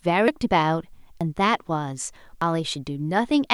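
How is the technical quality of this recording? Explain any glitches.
The recording has three skips in the speech, at 0.28 s, 1.21 s and 2.42 s. At each, the sound jumps straight ahead with no gap of silence, which tells it apart from a dropout. The first loses about a third of a second, the others about a tenth. The likely cause is a dropped buffer (overrun): samples were overwritten before being read, and the remaining audio was spliced directly together.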